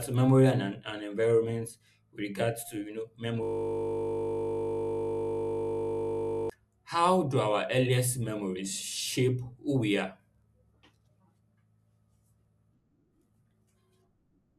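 After "regards to you know", from 3.43 to 6.50 s, a system hang loop replays one 20 ms piece of audio about 150 times, giving a steady 50 Hz buzz until "how do our earliest". Unlike a dropout, the repetition is exact and sustained rather than silent.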